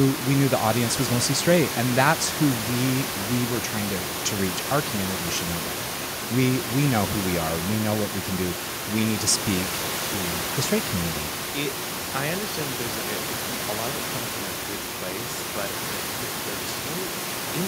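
Nothing in this speech recording sounds technically faulty.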